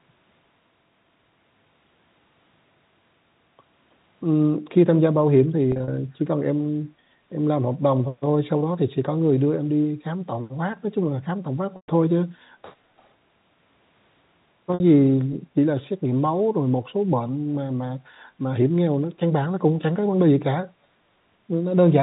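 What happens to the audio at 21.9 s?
Nothing goes wrong at 21.9 s: the speech carries on intact there, with the narrow telephone band of G.711 coding and no break, glitch or distortion.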